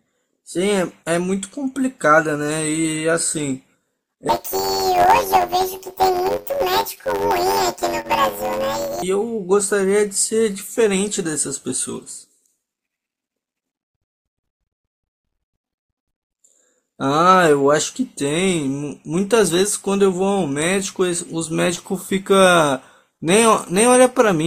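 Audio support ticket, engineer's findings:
Planar audio read as interleaved, 4.29–9.03 s. Speech turns into a robotic buzz near 92 Hz with no clear octave shift. The blocks are about 10.88 ms long. Each block's left half and right half play back to back at double speed, so the pace holds but the block rate becomes the buzz. Probable component: the sample-format negotiation between decoder and output.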